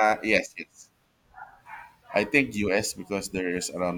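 At 2.63 s a crude rate conversion sets in and runs to the end of the clip. The sample rate was changed without a proper anti-aliasing filter. The grainy texture points to simple linear interpolation between samples, and the pattern fits a 48 kHz to 44.1 kHz conversion. The resulting error repeats with the ratio of the two rates. It sits roughly 30 dB below the speech. It is heard as an inharmonic fizz riding on the louder and brighter sounds.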